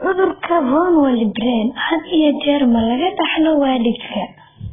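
Throughout, the speech stops at 3.6 kHz and sounds dull, smeared and warbling. This heavy damage is likely from AAC compression at a very low bitrate, near 8 kbps.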